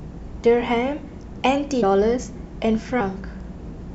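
Whole compressed frames went unplayed at 1.82 s and again at 2.99 s: compressed frames skipped. The speech jumps ahead about 70 ms, then about 50 ms, consistent with three and two 26.1 ms frames. Each join is a brief smeared blip rather than a click.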